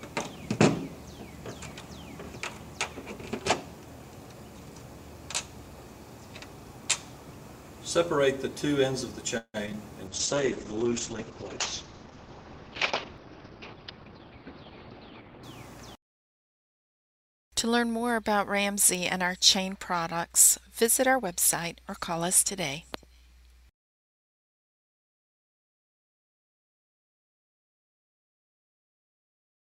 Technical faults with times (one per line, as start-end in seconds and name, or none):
9.37-9.56 call audio freeze
9.66-9.69 skip ahead
9.69-9.75 short concealed packet loss
10.09-15.49 call bitrate drop
10.09-11.26 jitter buffer slow-down
13.17-14.19 jitter buffer speed-up